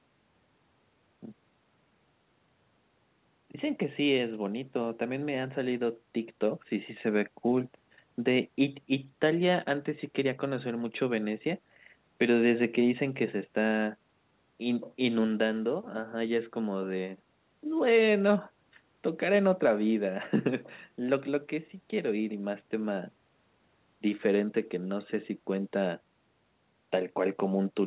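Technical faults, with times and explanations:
No technical faults, with times and explanations, to list for this speech clip.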